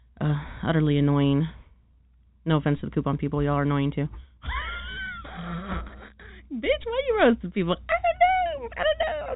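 This speech clip has nothing technically wrong with it to point to, just the usual narrow telephone sound of G.711 coding, with nothing coming through above about 3.8 kHz.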